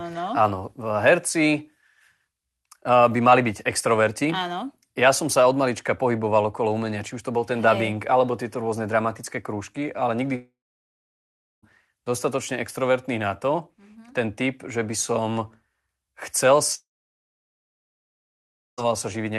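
At 10.35 to 11.65 s and again at 16.75 to 18.80 s, the speech breaks off into a brief fading buzz or hiss, then silence for about 1.1 s and 1.9 s. The likely cause is a long network dropout: the receiver briefly extended the last sound, then the speech resumes without the lost portion.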